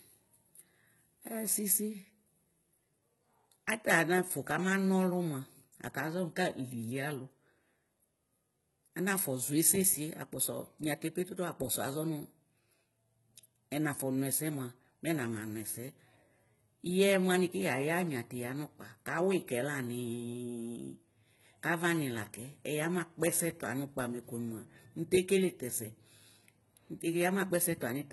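From start to finish, the speech carries heavy HE-AAC compression damage: the treble is likely rebuilt from copied lower bands, so s sounds turn gritty and lispy rather than simply dull, fitting a bitrate near 16 kbps, with nothing above 11.8 kHz.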